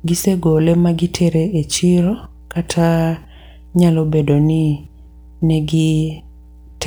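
Mains hum at 60 Hz runs from start to finish, about 25 dB below the speech. A ground loop or nearby transformer is letting the power line leak into the signal, leaving a steady low drone with some low harmonics underneath every phrase and pause.

Sample clock jitter is also present throughout. The converter's clock wanders by a few microseconds, so each sample lands slightly off time. The resulting error sits around 35 dB down as a grainy hiss that swells on loud, bright syllables and drops away in the gaps.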